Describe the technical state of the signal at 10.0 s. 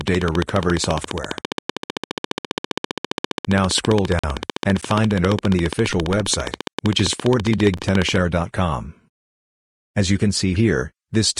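At 10.0 s the signal is intact, with no technical fault to be heard at that moment.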